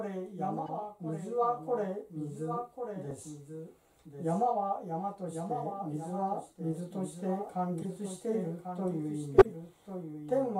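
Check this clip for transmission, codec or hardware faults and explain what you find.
Two faults are present: a doubled audio track for the whole clip, and four bursts from corrupt frames being decoded.

The doubled audio track runs throughout. A second full-band copy trails the original by about a second, at a level around 5 dB lower. It carries no decay or room colour, so it sounds like a clean, slightly quieter repeat rather than an echo. The likely cause is the same signal captured twice, once through a slower path, or an edit that left two copies out of step.

Corrupt frames decoded appear at 0.66–0.70 s, 3.11 s, 7.82–7.86 s and 9.38–9.47 s. Flipped bits in compressed frames were played anyway. Misread gains and codes put energy at the wrong frequencies for roughly a frame's length. Each event is a short chirp, blip or noise burst. The first three peak around -30 to -25 dBFS. The event at 9.38 s is far louder, near -10 dBFS, and spans several frames.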